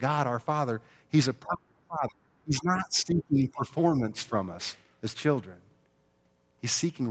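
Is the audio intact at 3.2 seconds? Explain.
No. From 2.44 to 3.71 s the speech is suppressed in double talk: the level dips by up to about 20 dB in pieces totalling about a second. The likely cause is an echo canceller mistaking the talker for loudspeaker echo while both sides spoke.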